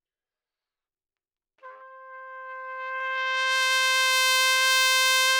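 From 4.14 s to 5.32 s the audio shows hard clipping. A stage in the chain received more level than it could pass, about 3 dB too much, so the loudest peaks were sliced off flat. At this modest overload the result is a brittle crackle riding on the peaks. Unlike soft saturation, which rounds peaks gradually and adds warm low-order harmonics, the abrupt corners here scatter energy high into the spectrum, giving a sharp, edgy grit.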